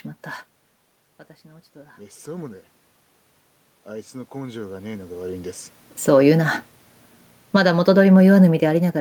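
Automatic gain rising, 1.46 to 2.72 s: the input dropped by about 17 dB, so the gain control climbed about 4 dB over more than a second, lifting the speech and room noise together. This is not the talker's shift near 0.5 s, which simply changes level at the microphone. The same automatic gain rising recurs from 3.84 to 5.37 s, again after a 17 dB input drop, this time about 7 dB, so the background swells with the voice. The talker moving near 5.0 s is a natural level change. Automatic gain falling, 7.41 to 7.73 s: the input came in too loud, or its background noise too strong, and the gain was pulled down about 8 dB, so the sound starts loud and sinks with its background. Gain rises again from 7.64 to 8.28 s, about 4 dB, then falls once more from 8.26 s to the end at 9.00 s, leaving the final stretch pumping up and down.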